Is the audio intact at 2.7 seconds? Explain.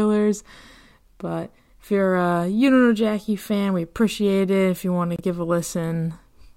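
Yes, the speech at 2.7 seconds is intact, with no dropout, click, distortion or other fault at that moment.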